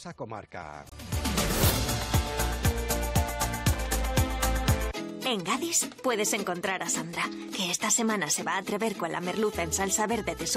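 At 0.89 s the sound drops out abruptly. This is a corrupt frame muted. Bits inside a compressed frame were damaged, so the decoder rejected it. The player filled the gap with silence instead. The hole lasts about 42 ms, to 0.94 s, which points to a single lost frame of roughly that length. The cut-in is sudden, with no fade. Timing holds, so the sound resumes exactly where it should.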